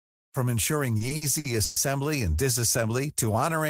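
From 0.97 to 1.78 s the speech shows repeated stalls (stutter). Packets arrived too late to keep the jitter buffer filled, so it ran dry five times, and each gap was bridged by extending the last sound, 270 ms in total and about a third of that span, the longest hold being 120 ms. Unlike packet loss, nothing drops out. The audio halts and resumes in place, giving a dragging, hiccuping rhythm.

Between 3.07 and 3.59 s comes a jitter buffer slow-down. To build up its reserve, the receiver repeated single pitch periods, adding 38 ms and playing that stretch at about 94% speed. What separates this from the earlier stutter is that there are no halts. The speech flows continuously but is drawn out at unchanged pitch.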